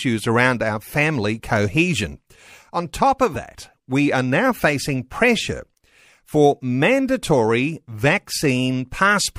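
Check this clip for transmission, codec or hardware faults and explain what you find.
There's one fault, a brief glitch in the speech. From 3.33 to 3.36 s the sound jumps ahead with a short garbled blip, about one 26.1 ms frame long. That's likely a broken MP3 bit reservoir: after frames went missing, the next frame reached back for its borrowed data and decoded bytes that belonged to a different frame.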